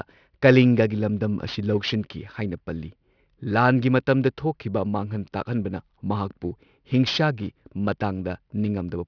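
Aliasing runs through the whole speech clip. The sound sits right where a drop from 44.1 kHz to 11 kHz would leave it, with no low-pass first. Energy above 5.5 kHz folds back down, leaving gritty, metallic sibilants and folded junk about 20 dB under the speech.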